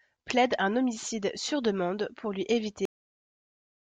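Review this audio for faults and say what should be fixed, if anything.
The speech has a cut-off end at 2.85 s, right after "sur demande pour lui". The sound stops mid-utterance and drops straight to digital silence. There is no natural decay. The silence fills the final 1.1 s of the file. The last stretch of audio was never written out, so the recording ends while speech is still sounding. To prevent this, flush and close the recording buffers fully before stopping capture or finalising the file.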